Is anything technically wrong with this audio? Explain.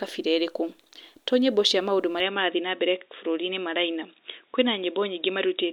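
Yes. From 2.20 s to the end, the speech suddenly turns dull and boxy, with nothing above about 3.8 kHz, and faint new background noise appears, roughly 50 dB below the voice. There is no gap at the change, and the loudness stays about the same. The likely cause is an input switched to a poorer device, such as a second microphone or a headset's call mode, whose narrower band and own noise replace the original input's.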